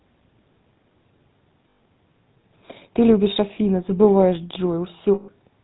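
The speech has passed through the GSM full-rate codec, and its coarse character fits the 13 kbps full-rate GSM coder. The system rebuilt the voice from a vocal-tract model driven by pulses spaced at fixed intervals, keeping only a fraction of the excitation and discarding everything above 4 kHz. As a result, the whole clip has a plainly audible buzzy, gravelly roughness and a dull, band-limited top end.

At 1.70 s, a run of lost GSM frames leaves about 100 ms of missing data, lasting until 1.80 s. The decoder filled the gap by reusing the last good frame's settings, so the sound briefly hangs as a rough, metallic ring. A longer loss of about 140 ms follows between 5.14 and 5.29 s. There the repeated frame rings for longer before normal decoding resumes.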